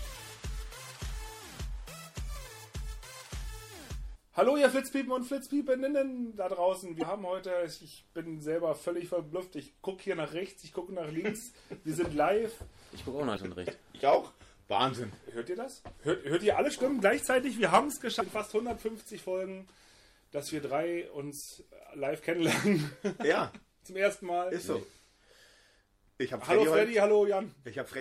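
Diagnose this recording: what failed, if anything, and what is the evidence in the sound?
Codec stage: throughout, the sound turns watery and swirly. This is likely MP3 compression starved of bits, consistent with about 64 kbps.

Storage or network stage: short glitches at 6.99–7.03 s, 13.34–13.38 s and 18.20–18.22 s are damaged data in the compressed stream, where the decoder misread frames and resynchronised.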